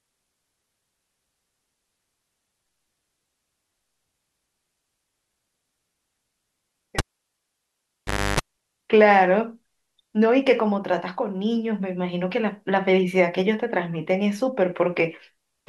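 At 6.99 s a pop marks a cable pulled and plugged in. The live connection breaks, leaving near silence for 1.37 s. A 0.31 s burst of 50 Hz mains buzz comes within that gap while only the tip touches, then a second pop restores the speech at 8.40 s.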